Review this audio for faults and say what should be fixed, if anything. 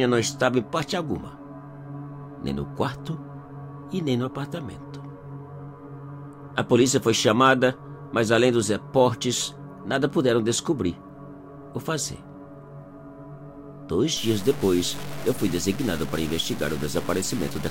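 From 14.17 s to the end of the audio at 17.70 s, the sound turns coarse and grainy, with a gritty distortion that rises and falls with the signal and crowds in close behind it. The likely cause is low bit depth without dither: the samples seem to have been truncated to about 5 bits, so the rounding error tracks the waveform instead of sitting as a steady hiss, and quiet passages break up most. Keep processing at full resolution and apply dither whenever reducing word length.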